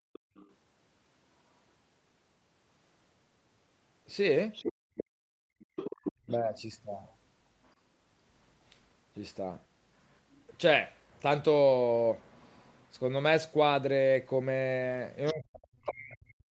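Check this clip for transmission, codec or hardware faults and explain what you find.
Three kinds of echo-canceller fault turn up in this speech clip, all tied to sound from the far end of the call.

Background gated by the echo canceller: While the loudspeaker was active, the canceller clamped down on the microphone path. It did this from 0.00 to 0.35 s and again from 4.73 to 5.69 s, with drops of about 31 dB and about 33 dB. The room tone between speech sounds falls away abruptly for about a third of a second at the start and for most of the later stretch, then returns when the canceller releases.

Other side's voice leaking through: A second, fainter voice comes through from 0.13 to 0.53 s, from 4.53 to 7.72 s and from 15.26 to 16.51 s. This is likely loudspeaker output that the echo canceller did not fully subtract from the microphone signal. The first scrap sits far below the main talker, roughly 25 dB down. 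The middle stretch is much more prominent, around 10 dB down. The final one is roughly 20 dB down.

Speech suppressed in double talk: Where both sides overlap, the canceller likely could not tell the near talker from the echo, so it attenuated everything. At 6.25 to 6.29 s the main voice briefly dips by roughly 20 dB, a quick 40 ms hole. From 15.32 s to the end it is pushed down by as much as roughly 40 dB, against the leaking far-end voice. Throughout, the audio is band-limited at 8 kHz by the call path.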